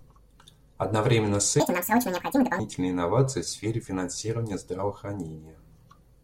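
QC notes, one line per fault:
1.6–2.59 s: section at the wrong speed, running 1.9x fast, so pitch rises around ten semitones and speech turns high and hurried; likely a clock mismatch.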